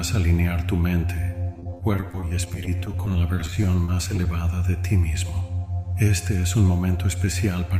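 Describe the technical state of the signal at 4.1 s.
At 4.1 s the signal is near the end of a stretch of repeated packet loss (robotic sound) running from 1.53 to 4.26 s. Packets kept arriving late or not at all, and each hole was patched by extending the last received audio. Dozens of gaps, none longer than 30 ms, recur in quick succession, with about a quarter of the span filled in. The sound turns choppy, with short pieces missing.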